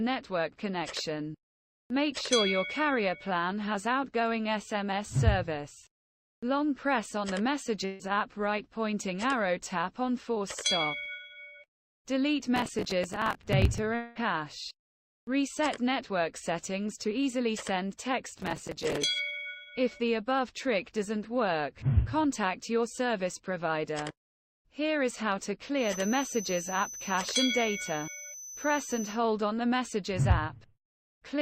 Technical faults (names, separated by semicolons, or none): burst of packet loss; processor overload crackle; long network dropout; feedback whistle